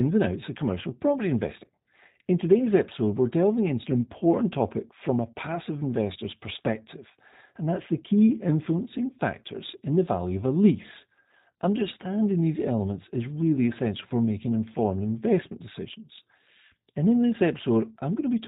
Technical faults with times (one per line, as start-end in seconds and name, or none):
0.00-18.48 G.729 codec